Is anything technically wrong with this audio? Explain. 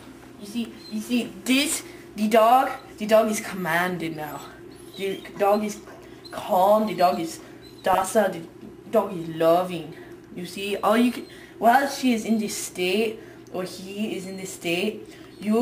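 Yes. From 7.93 to 8.02 s a corrupt frame was decoded: about five damaged frames played with misread codes, giving an error burst peaking around -10 dBFS, a bright smear on a spectrogram.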